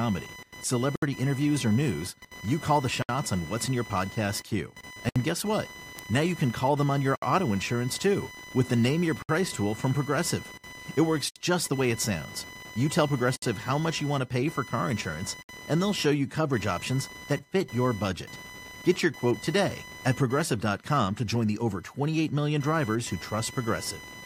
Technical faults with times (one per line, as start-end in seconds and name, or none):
0.00-24.25 computer activity noise
0.96-1.02 gap at a join of encoded pieces
3.02-3.09 gap at a join of encoded pieces
5.09-5.16 gap at a join of encoded pieces
5.99 bit error spike
7.16-7.22 gap at a join of encoded pieces
9.22-9.29 gap at a join of encoded pieces
11.29-11.36 gap at a join of encoded pieces
13.36-13.42 gap at a join of encoded pieces
15.42-15.49 gap at a join of encoded pieces